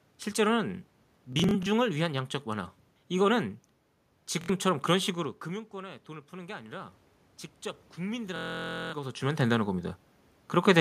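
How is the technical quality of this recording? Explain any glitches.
The recording has two kinds of technical fault: a wireless link that drops out in three places, and a gain control that reacts slowly to a drop in level.

Bluetooth stutter occurs from 1.33 to 1.67 s, from 4.41 to 4.50 s, and from 8.36 to 8.94 s. When packets arrive late or not at all, the receiver keeps replaying its last short buffer, so the speech briefly buzzes and then picks up further along. About 0.14 s of sound is missing in the first event, which is spread over a third of a second with a longest gap near 46 ms. The second event loses about 70 ms. The third is a sustained machine-gun buzz losing over half a second, which points to a long run of consecutive lost frames. A skip forward afterwards marks it as dropout rather than a scratchy source.

Automatic gain rising runs from 5.14 to 7.02 s. The talker moves away around 5.0 s and the input falls by about 17 dB. 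The gain control then raises its level gradually, by about 4 dB, so voice and room noise swell together over nearly two seconds. That slow joint swell is what sets it apart from the talker's own movement, which changes only the voice and leaves the background unchanged.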